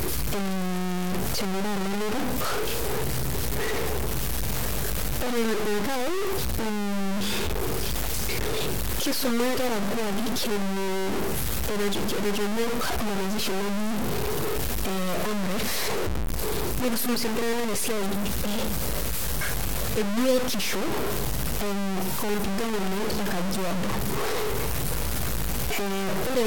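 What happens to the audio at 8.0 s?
At 8.0 s the speech carries the same heavy grainy distortion heard from start to finish. The likely cause is low bit depth without dither: the signal appears to be held to about 3 bits and truncated, so the rounding error tracks the waveform rather than forming a steady hiss. The error is roughly as loud as the speech itself. Louder syllables turn harsh and gritty, and quieter passages break up and sputter between a few coarse steps or drop to silence.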